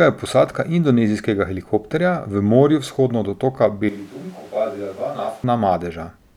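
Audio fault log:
3.89–5.44 s switch to a distant microphone: the close microphone's feed likely dropped out, leaving only a farther pickup, so the speech turns abruptly roomy and hollow, thinner in the bass, roughly 10 dB quieter, with room noise around 25 dB below it, before snapping back.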